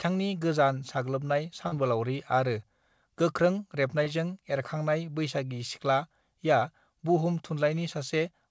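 Two short stretches of the call's packets arrived too late for the decoder, and the receiver covered each gap with short concealed packet loss. It extended the preceding sound and then crossfaded back into the real signal. The first, about 40 ms, runs from 1.68 to 1.74 s just after "गोजान साग्लोबनाय" and is heard as a brief smeared wobble. The second, about 20 ms at 4.04 to 4.08 s, is shorter. Both sit on a wideband call codec with nothing above 8 kHz, which fits G.722.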